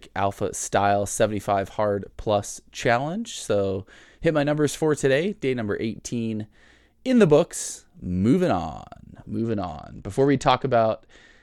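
At 9.37 s, and lasting to the end of the speech, a Bluetooth SBC bit pool drop sets in. The link appears to have been squeezed, and the encoder cut the bits per frame. The change fits a fall from a bit pool of 31 to 11, near 83 kbps. The upper sub-bands are starved and the rest coarsely quantised, so the treble turns dull and a gritty hash rises. On a spectrogram the high band empties abruptly, with grainy noise smeared across the remaining range.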